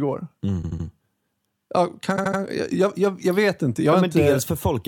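Repeated frames occur at 0.62 to 0.85 s and 2.16 to 2.39 s. Each time, a 78.4 ms block of compressed speech plays three extra times, adding 235 ms and causing a stutter. A spectrogram shows identical tiled slices.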